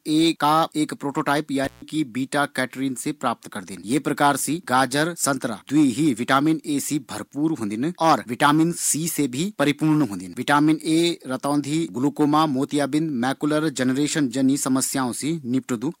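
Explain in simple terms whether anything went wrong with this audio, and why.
At about 1.64 seconds the speech drops out with a crackle for roughly 0.15 seconds: an intermittent contact, where a loose cable or plug briefly lost connection.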